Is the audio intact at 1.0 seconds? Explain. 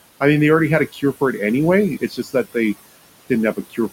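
No. Just after "they already had a", from 0.88 to 1.4 s, the speech sounds swallowed and faint, sinking by up to about 14 dB over roughly a fifth of a second. This is speech cut by the noise suppressor, which mistook soft speech for noise and turned it down. Noise suppressor artifacts are also present here: the background sinks between the words and rises under them because the suppressor, cutting steady noise by about 20 dB, keeps shifting its gain frame by frame on the room noise beneath.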